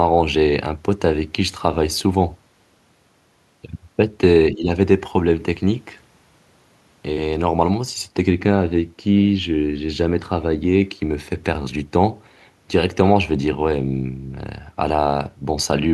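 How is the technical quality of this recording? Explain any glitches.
The recording has one glitch, a brief dip in the speech. From 4.54 to 4.7 s, both ends were likely talking at once, and the echo canceller, unable to tell this talker from loudspeaker echo, turned everything down. This speech suppressed in double talk drops the level by roughly 10 dB for about 150 ms, a short sag.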